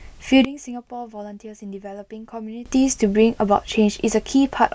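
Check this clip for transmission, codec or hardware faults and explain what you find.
One fault is audible, a sudden gain jump. From 0.45 s to 2.66 s the speech and background drop together by about 18 dB and then snap back. The likely cause is a digital gain change applied instantly, with no ramp.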